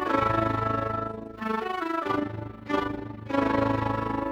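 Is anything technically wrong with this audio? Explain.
Yes. Overlap-add ripple runs through the whole clip. The sound was split into windowed frames and rebuilt with an overlap whose windows don't sum to a constant gain, so the level swells and dips once per frame, by about 11 dB, around 30 times a second. It comes across as a fast, rough flutter. The waveform envelope shows a regular scalloped pattern, and a spectrogram shows evenly spaced vertical bands of brightening and dimming across all frequencies.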